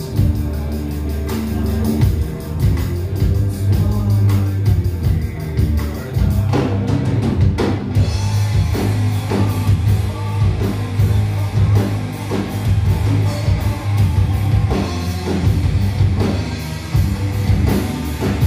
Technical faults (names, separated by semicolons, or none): none